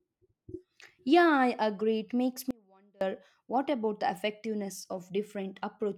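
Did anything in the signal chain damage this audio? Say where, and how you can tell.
Yes. An audio dropout to a faint residue runs from 2.51 to 3.01 s: the speech cuts out abruptly for about half a second, leaving only a faint leak roughly 30 dB down. The likely cause is a brief upstream break while the downstream path stayed live.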